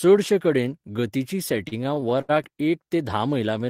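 Just after "चडशे कडेन गतिचीं", from 1.57 to 2.67 s, the speech shows repeated stalls (stutter): packets arrived too late or too slowly, so the jitter buffer kept running dry. Nine times the receiver stretched the last sound, the longest hold about 73 ms and roughly a sixth of that stretch filled, with nothing lost. It drags and hiccups. On a spectrogram, short smeared, repeated frames interrupt the harmonics; the waveform shows brief flattened, faded plateaus.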